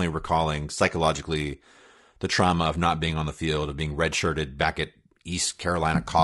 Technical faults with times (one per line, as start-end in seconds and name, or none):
0.00-6.23 low-delay AAC compression